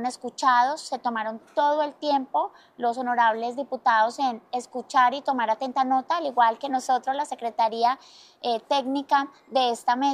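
Nothing audible to flag: no dropouts, no level problems and no timing irregularities anywhere in the audio.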